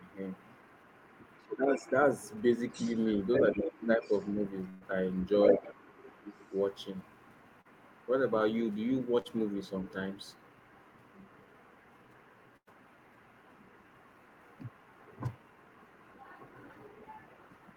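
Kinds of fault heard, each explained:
Other side's voice leaking through: From 0 to 8.09 s a second voice sits faintly under the main talker, roughly 20 dB down, then much fainter, around 35 dB down, from 8.99 to 16.19 s and from 16.86 s to the end. The likely cause is the far end's audio playing from the talker's loudspeaker, reaching the microphone, and not being fully removed by the echo canceller, so part of it is sent back across the call.
Speech suppressed in double talk: The talker's level dips at 1.41–1.86 s by about 15 dB, across most of that stretch, with smaller, briefer dips at 3.54–3.66 s and 3.97–4.12 s. These fall while the leaked voice is present, which points to the echo canceller struggling when both sides spoke at once. Unable to tell the near talker from the echo, it likely pulled the whole signal down, taking the talker's speech with it.
Burst of packet loss: At 4.69–4.83 s about 120 ms of audio is missing, and at 12.57–12.69 s about 100 ms. 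In both gaps the receiver stretched the last sound it had, fading it as the hole went on, so it is heard as a held buzz or hiss rather than silence. The speech then picks up further along, with the lost part simply gone.
Short concealed packet loss: Two brief holes of about 40 ms each, at 7.61–7.67 s and 9.21–9.27 s, were patched by the receiver. It carried the preceding sound forward to cover the missing audio, then blended back into the real signal. The result is a quick smear or wobble rather than a dropout.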